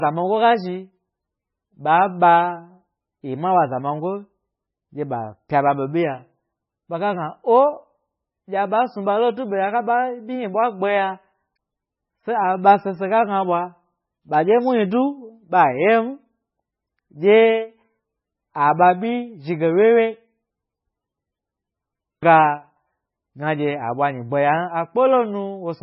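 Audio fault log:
throughout, MP3 compression: heavy watery, swirling artefacts and nothing above 5.5 kHz, likely from a bitrate around 14 kbps starving the encoder, which drops treble and weak frequency lines.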